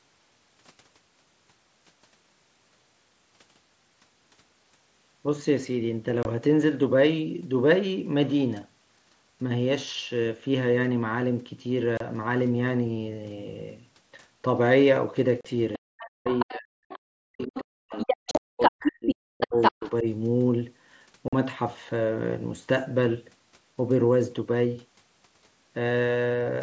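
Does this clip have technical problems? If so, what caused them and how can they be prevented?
Yes. The speech has three kinds of fault.

Unconcealed Bluetooth headset packet loss causes short holes with hard edges at 6.23 s (22.5 ms), 11.97 to 12.01 s (30 ms), 15.41 to 15.45 s (37.5 ms) and 21.28 to 21.33 s (45 ms). From 18.31 to 18.37 s, about 82.5 ms of gaps are scattered across 120 ms, with the longest run 37.5 ms, and that stretch sounds chopped. The hole lengths fit runs of whole 7.5 ms mSBC frames lost on the headset link and left unfilled. These gaps are sudden and far shorter than the suppression dips below. Preventing them means keeping the phone close and clear of 2.4 GHz interference and using a stack with packet loss concealment.

The other side's voice leaking through is heard from 15.73 to 16.54 s at about 5 dB below the talker, briefly at 16.90 to 16.99 s and 17.42 to 17.60 s at about 20 dB down, and from 17.99 to 19.90 s at roughly the talker's own level. 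A second, separate voice is present here rather than a gap or a dip, which most likely means the echo canceller left loudspeaker sound in the microphone signal. Using headphones or a better-tuned echo canceller would prevent it.

Speech suppressed in double talk shows as the talker's voice sinking, by up to roughly 40 dB, from 15.77 to 16.91 s (about a second affected) and from 17.25 to 20.06 s (about two seconds). The dips coincide with the leaking voice, unlike the brief packet holes. The likely cause is the echo canceller ducking everything while both sides spoke at once. A full-duplex canceller, or headphones that remove the echo path, would prevent it.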